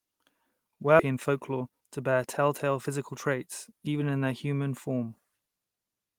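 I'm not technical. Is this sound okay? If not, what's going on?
No. At about 0.99 to 1.01 s there is a skip ahead: roughly a second of speech is simply missing, and playback jumps straight on with no silence or filler. Unlike a dropout, you hear no gap, just an abrupt join.

From 1.09 to 3.13 s comes a jitter buffer speed-up. After the jump, the receiver is holding too much waiting audio, so it snips out tiny slices repeatedly. Speech runs about 13% fast, losing around a third of a second, yet the pitch stays normal, unlike a chipmunk-style speed change.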